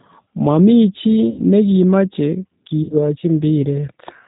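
Throughout the recording the speech carries G.729 codec damage, which is plainly audible. At 8 kbit/s the decoder rebuilds each 10 ms frame from a vocal tract filter, a pitch predictor and a handful of pulses, so everything above 4 kHz is gone and the voice sounds rough and slightly synthetic. What sets this apart from simple telephone band-limiting is that graininess. A low-pass filter alone would leave the voice dull but smooth.

From 1.30 to 1.41 s, VoIP packet loss concealed by the speech codec takes over. About 80 ms of audio went missing, which fits four 20 ms packets. The decoder keeps extending its last pitch and filter settings at falling gain, so the sound becomes a buzzy tone or coloured noise that fades. The same happens from 2.83 to 2.93 s, where about 60 ms was lost, consistent with three packets. Unlike a dropout to silence or a hard click, each gap is filled with stretched, decaying voice-like sound. 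The speech also sounds weak or distorted for a short while afterwards, as the decoder's state recovers.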